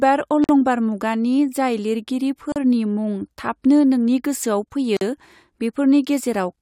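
Pieces of the speech were encoded separately and joined untrimmed, so encoder start delay and end padding remain. Each gap at a join of encoded pieces is an abrupt silence with smeared edges: 48 ms at 0.44 s before "मुगानि जाय लिरगिरी", 38 ms at 2.52 s after it, and 45 ms at 4.97 s. The speech then resumes where it stopped.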